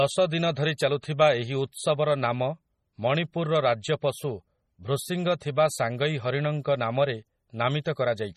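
From start to finish the speech carries heavy damage of the kind MP3 compression at a very low bitrate, likely around 32 kbps, leaves: watery, swirling texture, chirpy sibilants and smeared onsets. A spectrogram would show a hard treble ceiling and speckled, flickering gaps where weak frequency lines drop out.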